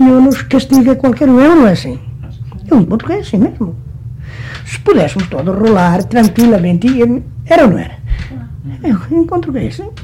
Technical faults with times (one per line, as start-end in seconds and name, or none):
none